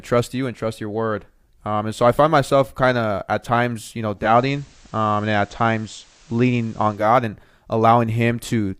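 This speech clip... no. Start with content.

Speech in which, from 4.15 to 7.10 s, digital radio blends to analogue FM over about 213 ms: hiss rises, level shifts about 2 dB, unlike a codec dropout.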